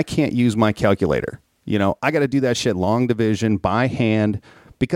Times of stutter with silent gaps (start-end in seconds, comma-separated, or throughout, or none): none